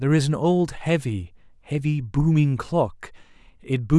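A short speech recording with no audible technical faults anywhere in the signal.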